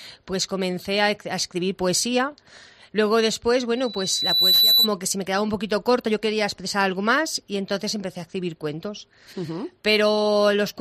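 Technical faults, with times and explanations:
3.75 to 4.9 s, loudspeaker feedback squeal: a pure tone at 4 kHz rises out of the sound, swelling over roughly the first 0.7 s until it sits about 5 dB above the programme, then stops at 4.9 s. A microphone was hearing the loudspeaker it drives, and at 4 kHz the round-trip gain went above unity, so that frequency fed itself on every pass and kept growing.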